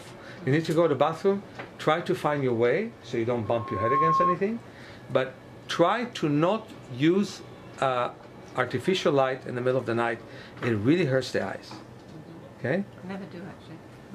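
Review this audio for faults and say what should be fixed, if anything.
From 3.45 to 4.39 s, a loudspeaker feedback squeal swells over about half a second into a steady 1.1 kHz tone, roughly 5 dB above the programme. The microphone re-amplifies its own loudspeaker output at that frequency. To prevent it, lower monitor gain, move the microphone away from the loudspeaker, or notch 1.1 kHz.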